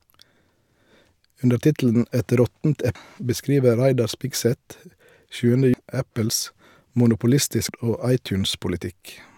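A speech recording with damaged data in a compressed stream, heard as three brief glitches at 2.95 s, 5.74 s and 7.69 s. Corrupted bytes make the decoder misread those frames and lose sync until it finds the next frame header. On a spectrogram each appears as a narrow vertical smear of broadband or oddly tonal energy breaking the speech harmonics; the waveform shows a short, abrupt discontinuity.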